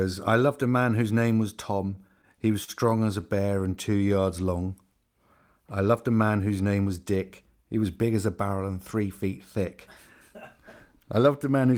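Scattered short gaps run through this speech clip from 1.95 to 3.63 s, where about ten small holes, the longest around 40 ms, are bridged by carrying the preceding sound forward. Together they fill roughly 150 ms, around 7% of that stretch, so the speech stays clear but picks up brief ticks, smears and hiccups wherever a lost or late packet was patched over. A jitter buffer slow-down follows from 3.89 to 4.22 s. The receiver repeats single pitch periods and slivers of pause to rebuild its reserve, adding 40 ms and stretching the sound to 91% speed. The pitch holds steady while sounds are drawn out.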